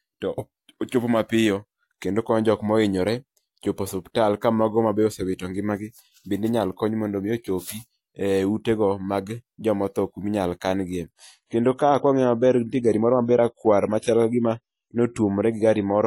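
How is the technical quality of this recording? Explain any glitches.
The speech has one clear quality problem near the end. Adaptive stream at a lower bitrate, from 11.12 s to the end: the player suddenly switched to a leaner encoding, so everything above 11.5 kHz vanishes and codec artefacts thicken, with no gap.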